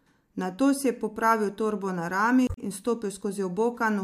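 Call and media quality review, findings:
Damaged data in a compressed stream, 2.44 to 2.58 s in speech: short glitch, about 140 ms. Probable component: decoder input. Corrupted frame bytes misread, sync lost, decoder rescans for next valid frame header. Timing shifts by roughly 20 ms at recovery. Check transport integrity and framing upstream of decode.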